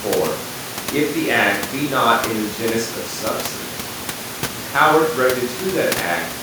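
Nothing stood out on listening through the speech, with only the room's background noise sitting about 12 dB below the speaker.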